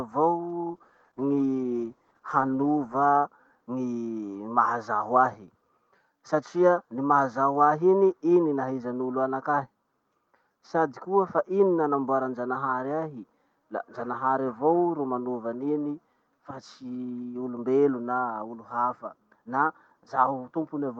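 Speech with a call bitrate drop from 0.72 to 3.09 s: the sound turns rough and muffled for about 2.3 s, which fits the encoder falling from 32 to 13 kbps. On a spectrogram the upper band thins out and cuts off early, then fills back in.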